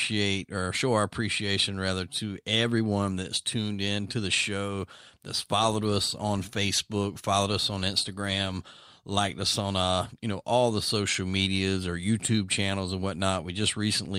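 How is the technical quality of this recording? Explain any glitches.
No technical faults are audible.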